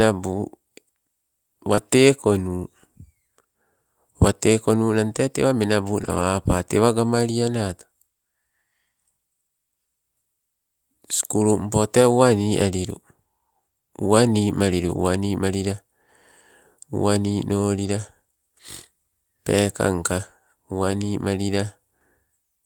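At 1.75 to 1.79 s there is a short concealed packet loss. About 20 ms of the speech did not arrive in time, and the receiver covered the gap by extending the preceding sound. The join is audible as a brief smear or wobble rather than silence. Over the final part of that same span, from 1.77 s, the audio takes on the rougher texture of a lost packet rebuilt from error correction.

That error-correction rebuild recurs through the rest of the clip. A lost packet was replaced by the lower-bitrate copy carried in the following packet, so there are no gaps. The patched frames sound grainier and noisier than the audio around them. The rebuilt stretches are 100 ms at 6.03 to 6.21 s, 20 ms at 12.01 s, 60 ms at 14.87 to 14.97 s, 60 ms at 17.79 to 17.89 s, and 20 ms at 20.91 s. The longer ones are several separate 20 ms packets patched within a short window rather than one continuous rebuild.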